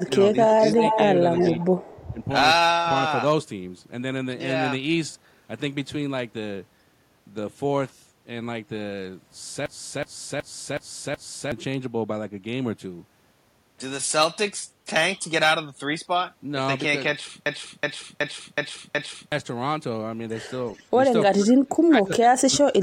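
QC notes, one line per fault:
0.0 to 2.25 s, echo leak: a copy of the speech trails about 340 ms behind at only about 5 dB down, likely an echo canceller letting loudspeaker pickup through.
0.02 to 2.2 s, speech suppressed in double talk: the voice dips by up to roughly 10 dB for about half a second in all, likely the canceller ducking both talkers while they overlap.
9.66 to 11.52 s and 17.46 to 19.32 s, system hang loop: a 372 ms chunk repeats five times at about 2.7 Hz, a stutter where the system froze and the hardware kept replaying its buffer, which fits a 16384-sample ring buffer, and about 2 s of audio is lost each time.
20.75 s, echo leak: a faint scrap of delayed speech about 362 ms late, roughly 35 dB below the voice, likely a small slip past the echo canceller.
21.3 to 22.83 s, speech suppressed in double talk: the voice dips, as deep as about 35 dB over roughly 1.5 s, likely from heavy suppression during overlapping talk.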